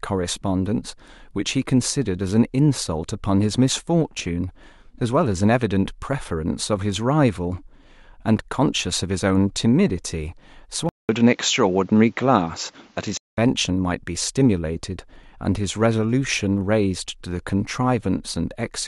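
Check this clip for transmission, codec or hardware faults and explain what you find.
One fault stands out in this speech clip. From 10.89 s to 13.37 s, after a 200 ms gap, the speech turns dull and boxy with nothing above 7.6 kHz, a new noise floor sits well below the speech, and loudness stays steady. This is likely an input switched to a poorer device, a narrower-band microphone carrying its own tone and noise, before the original input returns.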